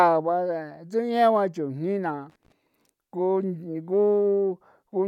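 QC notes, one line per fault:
2.28–2.52 s, loose connector crackle. For about a quarter of a second the speech breaks into an irregular burst of scratching and crackle. A worn or dirty contact in the signal path is making and breaking as it shifts. Each break chops the signal off and lets it back in. The rapid, uneven switching sounds rough and gritty. Any DC sitting on the line turns those edges into pops. The burst then clears.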